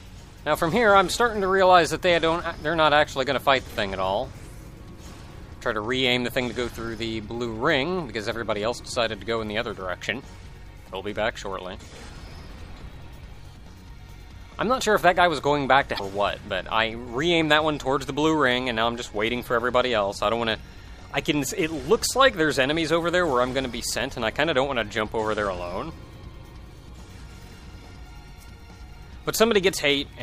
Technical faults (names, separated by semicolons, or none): damaged data in a compressed stream